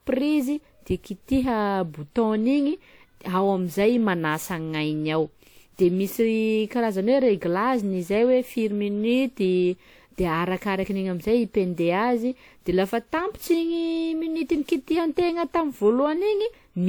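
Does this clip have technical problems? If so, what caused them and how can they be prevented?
Yes. Generation loss runs throughout this speech: a swirly, hollow, smeared texture with blurred consonant attacks, despite content reaching 20.1 kHz. It likely comes from about seven lossy WMA passes, consistent with 128 kbit/s, each requantising on a shifted frame grid. Prevent it by editing from a lossless master and encoding only once.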